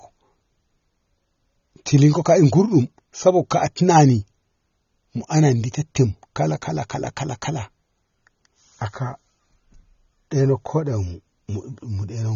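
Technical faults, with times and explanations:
Throughout, AAC compression: the speech sounds dull and smeared, with nothing above 7 kHz, so sibilants lose their crispness and sustained sounds take on a warbling, fizzy texture. The likely cause is AAC-LC encoding at a bitrate that fits about 24 kbps. With so few bits per frame, the encoder pulls its cut-off down and quantises the remaining frequency lines coarsely, leaving gaps in the spectrum that shift from frame to frame.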